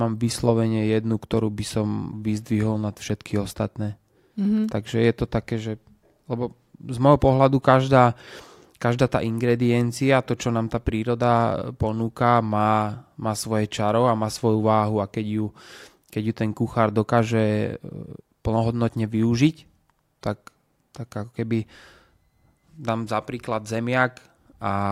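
No audible technical faults.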